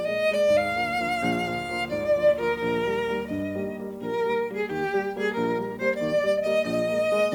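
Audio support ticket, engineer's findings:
Video or display buzz, 0.48–3.42 s. A 75 Hz buzz with hash above it sits roughly 20 dB under the music. Probable component: display or video cable coupling into the audio path, injecting interference at the picture's field rate.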